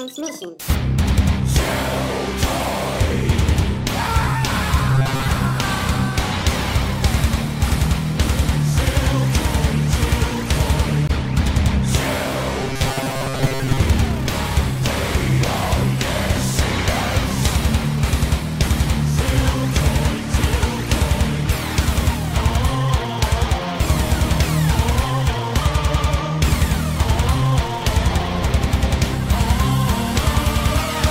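From 4.94 to 5.30 s and again from 12.62 to 13.80 s, the sound turns into a rigid metallic buzz pinned at 134 Hz: robotic sound from repeated short buffers, likely caused by late audio being covered by looping roughly 7.5 ms snippets most of the time. Unlike dropouts, nothing falls silent; unlike pitch shifting, the tone stays fixed.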